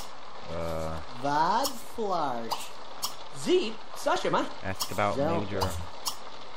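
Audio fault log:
4.16 s, repeated buffer: audio arrived late, so the device replayed its last 1.33 ms buffer twice more, heard as a brief click-like buzz from hard joins.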